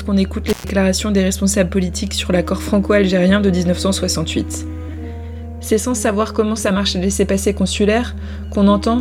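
At 0.49 s the sound drops out in an intermittent contact fault that runs to about 0.69 s, with the line fully open for roughly 115 ms of that stretch. A loose plug or cable momentarily breaks the signal path, so the audio vanishes, leaving only faint hiss, and crackles at the break and the reconnection. On a waveform the trace collapses to a thin noise floor between jagged spikes; a spectrogram shows bright vertical broadband streaks bracketing a nearly empty gap.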